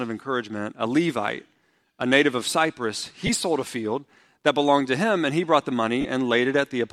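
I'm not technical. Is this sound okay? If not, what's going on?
No. There are two brief lost LE Audio frames glitches, at 3.27–3.29 s and 6.01–6.05 s, where the wireless link dropped data. Unlike a clean cut to silence, each gap is patched with a hissy smear of the preceding sound.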